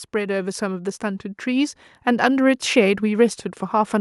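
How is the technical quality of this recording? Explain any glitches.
The recording has one clear fault: automatic gain rising from 0.11 to 2.37 s. The automatic gain control judged the input too quiet and pushed its gain up by about 7 dB, so the speech and the background noise swell together. On a waveform the envelope widens steadily, and a spectrogram brightens uniformly across all frequencies, noise floor included.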